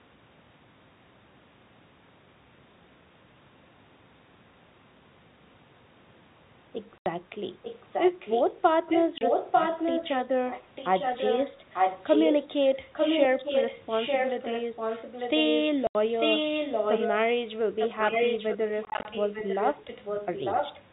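A telephone speech recording, band-limited to 4 kHz by its G.711 coding, carries two faults. Packet loss filled with silence cuts 80 ms holes at 6.98 s and 15.87 s, a 30 ms hole at 9.18 s, and 100 ms of short dropouts scattered between 18.85 s and 19.05 s. The hole lengths fit 10 ms packets. On a waveform these are flat gaps with abrupt edges, and on a spectrogram they are blank vertical strips. An echo leak adds a copy of the speech delayed by about 0.9 s (896 ms) during 7.62–8.43 s, 8.9–11.49 s, 11.74–12.49 s, 12.69–12.77 s, 12.93–17.07 s and 17.79–20.82 s. The echo runs from roughly 10 dB below the speech, to nearly as loud, to very faint at 12.69 s. It is likely caused by a far-end loudspeaker whose echo canceller let part of the signal return. A spectrogram shows the same harmonic patterns repeated about 0.9 s later, overlapping new speech.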